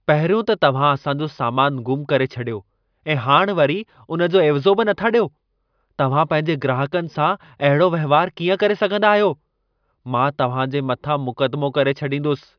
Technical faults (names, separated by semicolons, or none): none